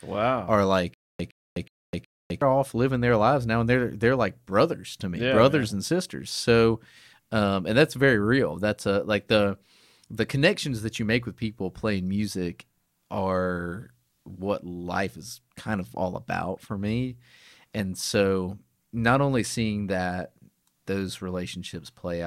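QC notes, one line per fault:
0.94–2.42 s, stutter with silent gaps: a 114 ms burst of speech repeats four times, each followed by 255 ms of dead digital silence, cycling every 369 ms. This is likely a stalled stream replaying its last fragment on each retry, so the speech that belonged there is lost.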